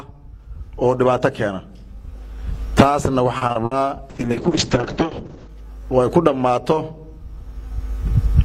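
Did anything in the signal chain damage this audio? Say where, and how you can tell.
Yes. At the network stage, packets went missing again and again between 3.37 and 3.73 s. This is repeated packet loss, and it gives a robotic sound. There are four separate holes, the longest about 60 ms. The receiver bridged them by stretching out the preceding sound, so roughly 160 ms is synthetic fill and about 120 ms is simply gone. With 44 percent of that span concealed, the result is choppy, with pieces missing.

The codec stage follows with a call bitrate drop from 4.1 to 5.55 s. The encoder was told to spend far fewer bits, and the sound points to a fall from around 128 kbps to about 6 kbps, held at the bottom for roughly 1.4 s. The audio band narrows from 20 kHz to 8 kHz, so the top end disappears and what remains turns coarse, watery and muffled until the bitrate climbs back.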